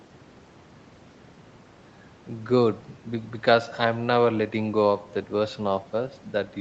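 Nothing in this speech amounts to a technical fault.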